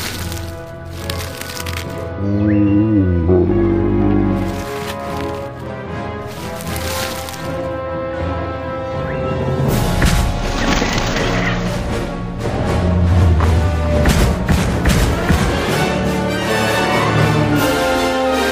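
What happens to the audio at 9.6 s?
Nothing goes wrong at 9.6 s: the audio carries on intact there, with no dropout, click, glitch or other fault at that moment.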